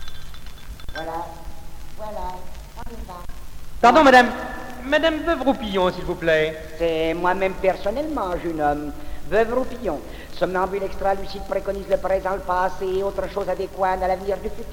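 From 3.85 to 4.21 s, hard clipping overdrives a stage by about 4 dB, flattening peaks into crackly fuzz; waveform tops go square, and the spectrogram shows harmonic smear reaching high up.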